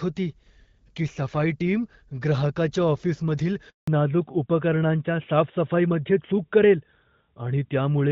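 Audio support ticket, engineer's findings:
Handover gap at 3.70–3.88 s: speech drops out for 180 ms, decaying within tens of milliseconds, then silence until the new link comes up. Probable component: network handover. No speech frames delivered during the switch, so content in that window is lost.

Fallback to narrowband from 3.88 s to the end: HD Voice band gone, nothing above 4 kHz, speech duller and rougher. Probable component: codec renegotiation after handover. Call dropped from AMR-WB to AMR-NB, sound consistent with roughly 12.2 kbit/s. Before the switch, AMR wideband (HD Voice) codec audible with light coding damage, consistent with about 12.65 kbit/s.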